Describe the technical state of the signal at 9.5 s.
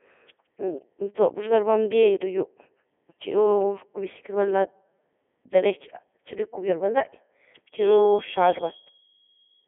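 A feedback whistle runs from 7.68 s to the end of the clip, so it is sounding at 9.5 s. A single steady tone near 3.3 kHz sits roughly 15 dB beneath the speech, thin and swelling and fading slowly in level. The likely cause is a loudspeaker feeding back into the microphone with the loop gain just short of runaway, so one frequency keeps ringing without building into a howl.

The Codec 2 vocoder affects the whole clip, and it is present at 9.5 s. The speech has a robotic, buzzy quality because the decoder rebuilds it from sine waves using only pitch, voicing, energy and a spectral envelope, and the original waveform is lost. The damage is heavy, even at the codec's top 3.2 kbit/s mode. The usable band runs from about 250 Hz to 3.5 kHz, with nothing above 3.7 kHz.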